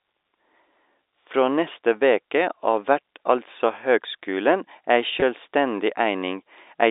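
A short speech recording carried over G.711 telephone coding, its 300 Hz to 3.7 kHz line band audible throughout. At 5.20 to 5.22 s, packet loss with pitch repetition: about 20 ms went missing, which fits one lost packet, and repeating the last pitch period leaves a brief held, buzzy tone.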